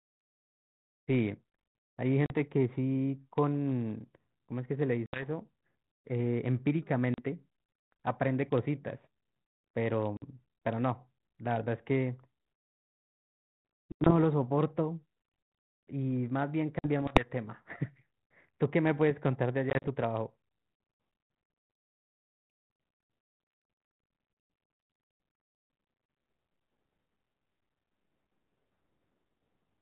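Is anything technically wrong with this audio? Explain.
Yes. Packet loss on an ADPCM call cuts hard silent gaps at 2.26, 5.06, 7.14, 10.17, 13.92, 16.79, 19.7 and 24.33 s. Each loses 40 to 90 ms. At 19.7 s it scatters over 140 ms. The decoder's predictor and step size lose track, so speech resumes with brief, slight distortion. The band-limited G.726 sound fits 32 kbit/s.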